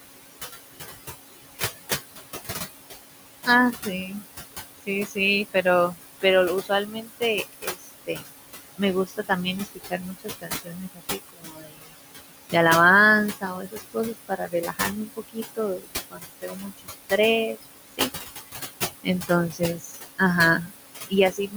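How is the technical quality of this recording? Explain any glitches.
The recording is hurt mainly by heavy noise suppression. The room noise sits only about 9 dB below the speech, and the processing fighting it leaves its own marks.

Noise suppressor artifacts run through the whole clip. The suppressor pulls down any band it judges to be steady noise, frame by frame, here by about 18 dB. So the background dips in the gaps and swells back up under speech.

Speech cut by the noise suppressor happens in four stretches: 3.44–4.22 s, 4.83–11.95 s, 13.41–18.1 s and 19.04–21.56 s. In each one the suppressor mistakes parts of the speech for noise and turns them down with the background. The drops reach about 15, 21, 22 and 18 dB. Only a fraction of each stretch is hit, from a fifth of a second early on to around three seconds in the longest. Soft consonants and word endings there sound swallowed or faded.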